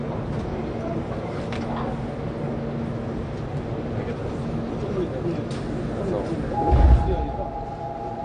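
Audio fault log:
Throughout: AAC compression, plainly audible as dull, smeared sound; spectrogram shows nothing above 9.6 kHz, a hard ceiling pointing to likely AAC-LC near 32 kbps.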